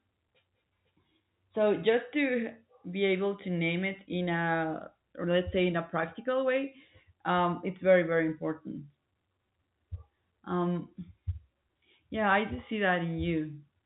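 No faults found: the speech sits on a standard G.711 A-law telephone path, with nothing above about 3.8 kHz and only the faint level-tracking quantisation noise that format always carries.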